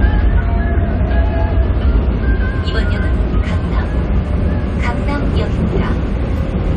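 No technical faults can be heard in this recording of sounds.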